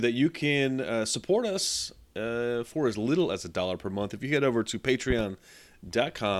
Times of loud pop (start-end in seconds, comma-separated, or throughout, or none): 5.10-5.23